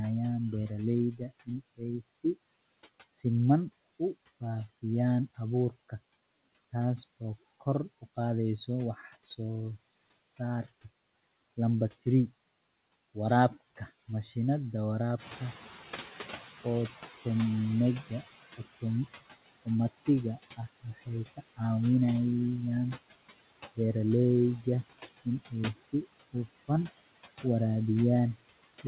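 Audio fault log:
Throughout: noise suppressor artifacts. The background is pulled down by about 17 dB in the bands the suppressor treats as steady noise, so it dips between phrases and comes back up beneath the speech. On a spectrogram the noise floor shows as scattered, blinking specks that change from frame to frame instead of forming an even haze. Everything lies below 4 kHz, which fits the narrowband G.711 call path.
1.12–2.36 s and 25.74–25.91 s: speech cut by the noise suppressor. In both places the suppressor took part of the speech for noise and turned it down along with the background. The first stretch loses about half a second of sound in total, with drops of up to about 22 dB. The second is a brief dip of about 12 dB over roughly 150 ms. Soft consonants and word endings come out swallowed or faint. The waveform shows sudden hollows in the envelope, and the spectrogram shows gaps where the weaker speech energy was erased.
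15.18–18.58 s: noise suppressor catching up. The room noise jumps by about 10 dB just after 15 s. The suppressor's noise estimate still matches the quieter level, so at first the louder noise gets through with little reduction. Over 3.4 s the estimate adapts, and the noise settles back to a cut of about 15 dB. On the spectrogram the floor brightens abruptly and then fades back over those few seconds, and the waveform's baseline thickens and then narrows.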